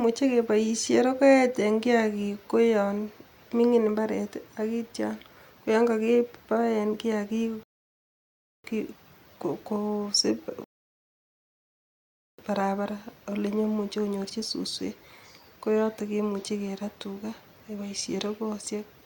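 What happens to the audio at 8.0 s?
At 8.0 s the speech cuts to silence, from 7.63 s to 8.64 s, then picks up exactly where it left off with nothing missing. This is a rebuffering stall: the player ran out of downloaded audio and waited for more, adding about one second of dead air.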